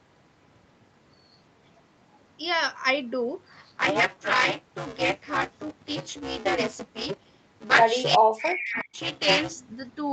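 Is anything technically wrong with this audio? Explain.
Yes, there are two faults.

From 3.52 to 9.52 s there is buffer tearing. A steady robotic buzz at 200 Hz rides on the speech and stops when the sound stops. The writer and the reader of the playback ring buffer have drifted out of step, so they cross within each period. Roughly two fifths of every buffer holds audio from about 10 ms earlier. Hard joins on both sides of that stale stretch repeat at the buffer rate and make the rattle.

From 8.17 to 8.99 s the speech dips and breaks up in pieces, for roughly 0.7 s in total. At its deepest it drops by around 40 dB. This is likely speech suppressed in double talk. The far side was probably talking at the same moment. The echo canceller could not tell this talker apart from its own loudspeaker echo, so it turned everything down.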